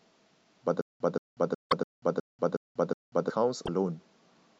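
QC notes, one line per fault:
0.81–3.30 s, stutter with silent gaps: the speech snaps into a loop, replaying the same 177 ms fragment seven times, each followed by about 189 ms of dead digital silence, so the burst returns at a steady 366 ms beat. The likely cause is a stalled player or stream that re-sent its last buffered fragment on each retry and then ran dry. Whatever audio belonged to that span is gone.
1.69–1.73 s and 3.65–3.69 s, broken MP3 bit reservoir: at each point the speech lurches forward and a brief 40–42 ms garbled glitch sits right at the join. The length matches roughly one and a half 26.1 ms MP3 frames. This is likely the result of frames being cut out. The next frame then reached back into the reservoir for borrowed bits and decoded bytes from the wrong frame, producing a short corrupted patch before decoding settled.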